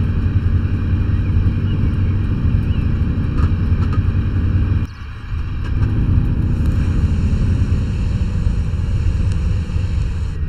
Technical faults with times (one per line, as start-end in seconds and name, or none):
0.00-10.49 channel delay (comb filtering)